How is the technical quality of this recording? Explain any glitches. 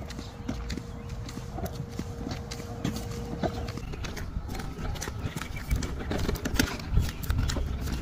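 No technical glitches can be heard anywhere in the recording. Nothing in it calls for an explanation.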